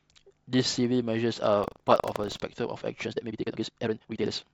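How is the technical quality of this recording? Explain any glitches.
Two glitches mar the recording. From 1.6 to 2.42 s there is buffer tearing: the writer and reader of the playback ring buffer have slipped, so a small slice of each period replays audio from about 70 ms earlier. It gives a hard 25 Hz rattle that rides only on the speech, unlike steady hum. From 3.02 s to the end, a time-stretched section runs the speech at 1.97 times its pace with unchanged pitch, likely from software squeezing it to fit a length. It sounds rushed, and the unchanged pitch sets it apart from a simple speed-up.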